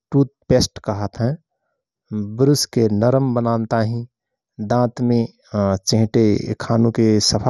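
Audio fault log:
Throughout: channel delay (comb filtering). One channel runs roughly 0.2 ms behind the other, and when the two are summed to mono the shared speech content cancels at evenly spaced frequencies. The first notch sits around 3 kHz, right in the presence region, with further notches at regular intervals above it. The result is a hollow, phasey quality that stays fixed rather than sweeping, because the offset between channels is constant across the whole clip.
Throughout: MP2 compression, likely at a low bitrate. The top of the spectrum stops dead near 12.9 kHz, leaving the speech dull and lacking air. The remaining upper bands drop in and out from moment to moment, and what survives carries a coarse, gurgling graininess. That combination of a hard ceiling, flickering sub-bands and quantisation grit is the signature of a Layer II encoder starved of bits, and here the damage is plainly audible.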